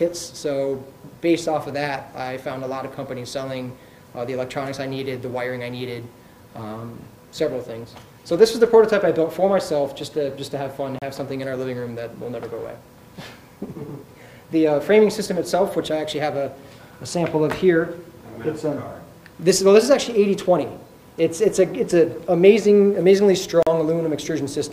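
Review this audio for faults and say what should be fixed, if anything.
Two brief dropouts, at 10.99 s (32 ms) and 23.63 s (40 ms), are likely a Bluetooth stall: resent packets arrived late and the buffer emptied, showing as flat waveform gaps and blank spectrogram columns. Keeping the phone closer to the headphones, away from 2.4 GHz interference, would prevent it.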